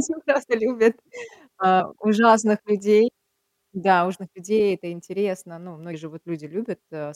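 At 0.42 to 0.44 s, 1.79 s and 4.14 to 4.16 s the speech jumps ahead, dropping roughly 50 ms, 150 ms and 200 ms of audio. Those are compressed frames skipped: whole chunks went missing or the decoder threw them out as damaged, and the step sizes fit a frame of about 23 ms.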